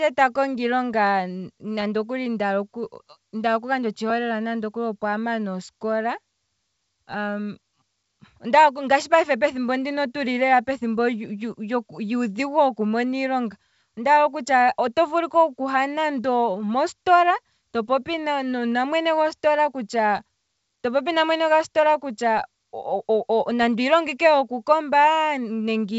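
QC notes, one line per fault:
No faults to log; the speech comes over a G.722 wideband telephone path at 64 kbit/s that is working normally.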